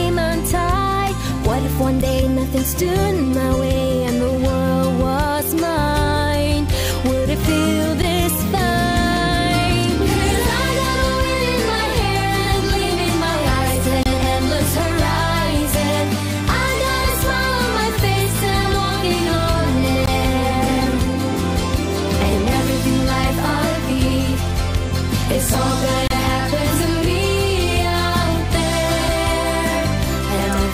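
The timestamps of consecutive stream segments, which arrive every 6 seconds, fail to line up, so the player pads each join with silence. This causes a gap between stream segments: a hard-edged dropout at 2.01 s, 8.02 s, 14.03–14.06 s, 20.06–20.08 s and 26.08–26.11 s. The holes run from roughly 8 to 29 ms and are longer later in the clip. They interrupt the audio abruptly, but nothing is missing, because silence is inserted rather than material removed.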